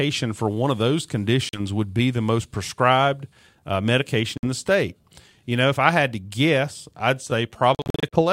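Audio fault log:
1.49–1.60 s, Bluetooth dropout: a short hole of about 42 ms, likely packets reaching the headphones too late.
4.37–4.44 s, Bluetooth dropout: about 56 ms missing, and the speech resumes further on, as if it had kept playing.
7.75–8.21 s, Bluetooth dropout: a choppy burst of gaps, about 238 ms in all, none longer than about 42 ms.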